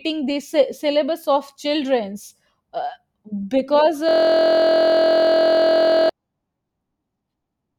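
From 4.09 to 6.09 s, a system hang loop cycles one frozen 23.2 ms buffer, which fits 1024 samples, producing a steady 43 Hz buzz.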